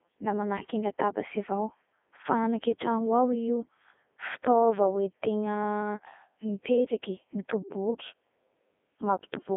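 From start to finish the speech sounds robotic and buzzy, with a thin, boxed-in tone: there is little below about 250 Hz, the band rolls off around 3.5 kHz, and nothing remains above 3.7 kHz. This is the Codec 2 vocoder at work. Rather than carrying the waveform, it transmits only pitch, voicing, energy and a coarse spectral envelope, and the decoder rebuilds the voice from sine waves. The heavy damage fits its top rate of about 3.2 kbit/s.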